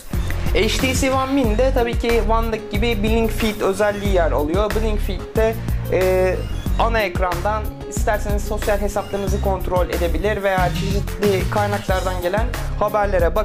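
No technical faults can be heard anywhere in the audio.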